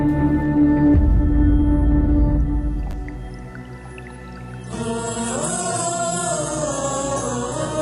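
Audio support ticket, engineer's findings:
Chunks out of order, 2.91–2.93 s: jumbled instant with three hard joins, a 10 ms chunk playing one chunk late. Nothing missing, unlike a dropout.

Adaptive stream at a lower bitrate, 4.61 s to end: sudden switch, no gap, codec artefacts rise, nothing above 11.1 kHz. Points to a drop from about 96 to 12 kbit/s.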